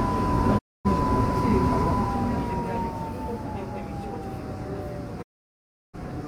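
A recording of sounds with two digital broadcast dropouts. The audio fades to silence over about 20 ms at 0.57 s and returns at 0.87 s. It cuts again from 5.21 s to 5.96 s. The receiver lost the signal or got frames that failed their checksum, so it muted until valid frames arrived. The gaps fit about 8 and 22 lost frames. Everything sent during each gap is gone.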